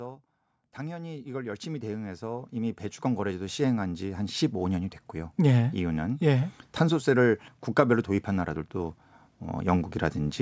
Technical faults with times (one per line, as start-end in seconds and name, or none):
0.77-5.43 automatic gain rising